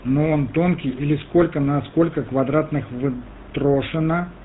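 Speech running through the GSM full-rate codec for its whole length, with plainly audible buzzy, gravelly roughness that fits a 13 kbps vocal-tract model driven by decimated pulse excitation. A spectrogram shows energy cut off flat at 4 kHz, with coarse, smeared harmonics below.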